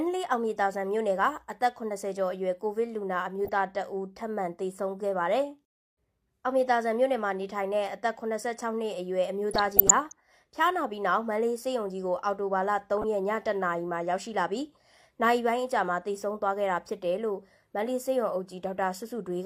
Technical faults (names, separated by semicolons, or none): DAB burbling